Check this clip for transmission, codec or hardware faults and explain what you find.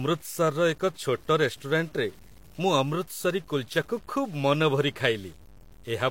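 One fault runs through the whole speech clip: low bit depth without dither. The grain sits about 30 dB below the speech and is likely from truncation that fits 8 bits. Unlike steady hiss, it follows the signal and turns quiet passages gritty.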